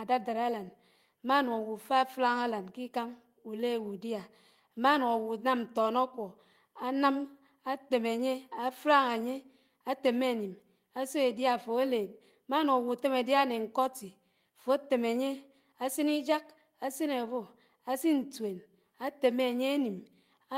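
Listening through the speech, nothing stood out as a technical problem at any point.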